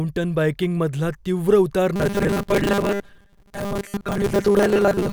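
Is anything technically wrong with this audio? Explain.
Yes. From 1.96 s to 5.13 s, right after "बाइकिंगमधला तीव्र उतार", the speech takes on robotic sound from repeated short buffers. A rigid, metallic buzz at 200 Hz sets in. The likely cause is audio arriving too seldom, with about 5 ms chunks repeated most of the time.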